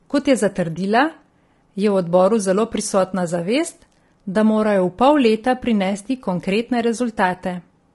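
Speech carrying low-delay AAC compression damage from start to finish: the voice sounds rough and grainy, with noise filling the gaps between pitch harmonics and a thin, synthetic-sounding top band. This is likely AAC-ELD, whose short frames resolve harmonics poorly, and the plainly audible damage points to a low bitrate around 32 kbps.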